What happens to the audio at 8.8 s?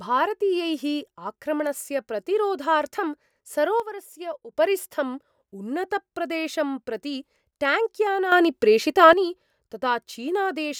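At 8.8 s the speech and its background noise sit abruptly about 9 dB louder, from 8.32 to 9.13 s: a sudden gain jump, likely an unramped digital gain change.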